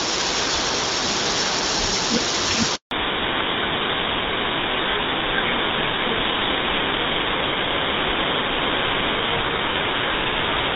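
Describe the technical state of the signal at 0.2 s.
At 0.2 s the speech is intact, with no fault present; it passes through the AMR wideband (HD Voice) codec, whose light coding, consistent with a rate around 12.65 kbit/s, leaves it clear.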